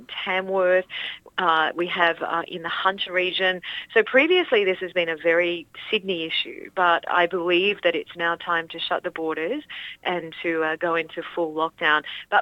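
Nothing in the recording stood out as a technical problem on listening.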